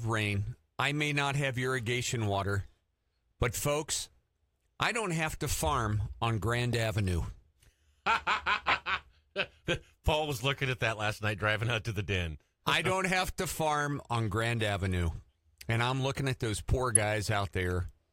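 Bit errors in a few compressed frames, decoded anyway, misplace energy in frequency: corrupt frame decoded at 6.73 s, 8.68–8.78 s and 16.95 s, after "looking at those poor", each a brief chirp, squeak, blip or burst of noise.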